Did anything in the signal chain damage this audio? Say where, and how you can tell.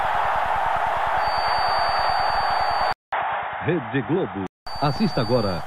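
Yes. A feedback whistle starts at 1.13 s and runs to the end. It is a thin, steady tone at 4.6 kHz, sitting roughly 15 dB below the main sound, and its level swells and fades slowly. It never builds into a howl. The likely cause is an acoustic loop from loudspeaker back into the microphone. That loop is held just at the feedback point, so one frequency keeps ringing without running away.

The input switched to a poorer device between 2.93 s and 4.67 s. The stage is device selection at the driver. A 200 ms silence marks the switch. After it, nothing remains above 3.8 kHz, so the sound turns dull and boxy. A faint new noise floor appears, far below the signal. Overall level stays about the same. Likely cause: the system dropped to a narrower-band microphone or headset call profile, then returned.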